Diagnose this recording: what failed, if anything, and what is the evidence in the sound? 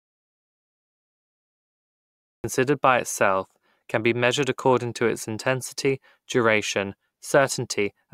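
The input side dropped out: an audio dropout to silence that's already under way when the clip opens and runs to 2.44 s. It's dead silence, no room tone, then speech cuts in mid-flow. That most likely means a lost input device or link, with the recorder writing silence.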